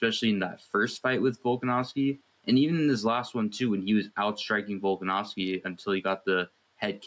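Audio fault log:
throughout, gain pumping: the gain is pulled down by around 5 dB under each loud sound, so loud and soft parts sit unnaturally close in level and the whole clip sounds squashed. The likely cause is input gain set far too high, with a fast limiter or compressor clamping down on each peak.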